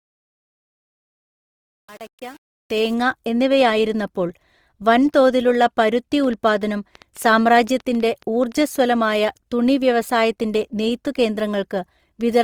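From 0 to 2.94 s the fade-in's quiet start shows truncation distortion on a fade. The gain stage keeps too few bits, fitting roughly 7-bit resolution, with no dither, so the low-level speech turns gritty. Unlike plain noise, the grit follows the signal.

Across the whole clip the speech sounds rough and grainy, most likely from Opus compression in its music mode at a rate around 24 kbps. The band is still filled to about 20 kHz, so it is not muffled or swirly like MP3.

From 5.88 to 8.77 s a train of clicks runs at about 5.2 per second, roughly fifteen similar pops at uneven spacing and about as loud as the speech. They tick through the pauses too, so they are not codec grain, and they likely come from interference or a faulty connection.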